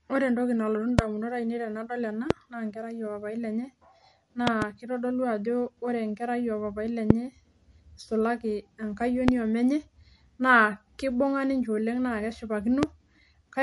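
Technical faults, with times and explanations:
Throughout: MP3 compression. The sound points to a likely low-bitrate MP3 encode, consistent with about 48 kbps. With too few bits, the encoder discards weak frequency lines, and they pop in and out from frame to frame. It also removes everything above 11.3 kHz. The damage is plainly audible: the speech has a watery, swirling texture, s sounds turn metallic and chirpy, consonant onsets smear, and the top octave is missing.
0.99–1.01 s, 2.31–2.33 s, 4.47–4.64 s, 7.10–7.13 s (just after "oo papai"), 9.28–9.31 s and 12.83–12.85 s: loud pop. Each is likely a sudden voltage step or spike, such as a plug, switch, static discharge or driver glitch, added to the signal and shaped by the circuitry after it. Each is a single sharp pop except at 4.47–4.64 s, where two arrive in quick succession. They peak roughly 20 to 25 dB above the speech, which continues underneath.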